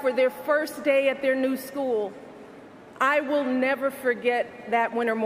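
No technical faults can be heard anywhere in the audio, and the signal stays continuous and stable throughout.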